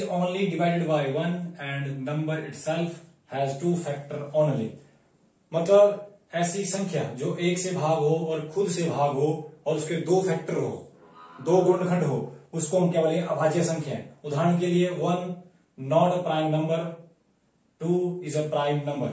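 No technical faults are audible; the sound has passed through a call's microphone processing, whose high-pass filter trims the lowest bass and whose band stops at 8 kHz, both normal for that path.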